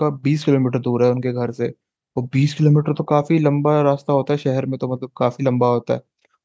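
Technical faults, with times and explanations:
No technical faults heard.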